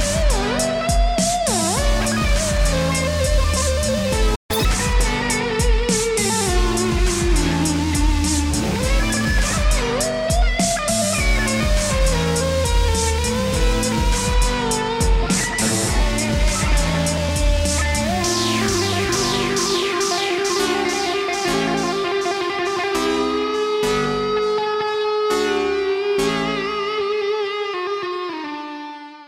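At 4.35 s the audio drops out in a playback stall. The sound stops mid-flow and stays silent until 4.51 s. The stall itself measures 139 ms. The likely cause is the player running out of data, or its thread being blocked, so nothing reached the output. When sound returns, it does not simply carry on at normal speed.

From 4.51 s to 4.65 s comes catch-up at higher speed. The player works through its backlog by resampling. Playback runs at 2.0 times normal speed. Pitch rises with it, by roughly ten semitones. The effect is a short, squeaky, chipmunk-like burst lasting about 0.14 s. Then speed and pitch return to normal.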